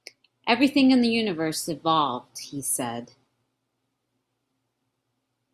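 No technical faults can be heard anywhere in this speech recording. There is nothing in it that calls for a timestamp or a diagnosis.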